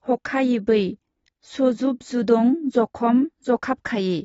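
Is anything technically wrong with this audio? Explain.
Yes. Throughout, the speech is dull and fizzy, with nothing above 7.6 kHz. This is likely AAC compression, consistent with roughly a 24 kbps bitrate and its coarse spectral quantisation.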